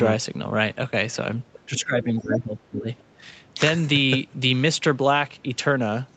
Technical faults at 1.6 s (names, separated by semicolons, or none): other side's voice leaking through; speech suppressed in double talk